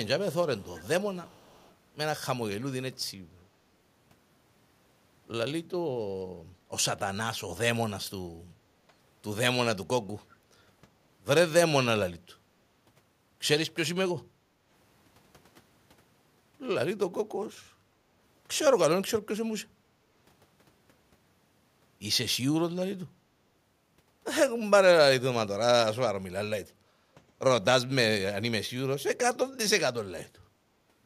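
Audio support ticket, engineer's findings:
Echo leak: faint delayed copy of the talker at 0.04–0.08 s, 0.58–0.88 s, 1.24–1.75 s and 17.58–17.62 s, trailing by 362 ms at about -25 to -35 dB. Likely the far end's echo canceller letting loudspeaker pickup through into its mic, which gets sent back.

Background gated by the echo canceller: room tone ducks at 14.28–14.66 s (about 11 dB down) and 26.96–27.13 s (about 9 dB), then comes right back. The canceller is clamping the mic while the speaker plays and releasing once it goes quiet.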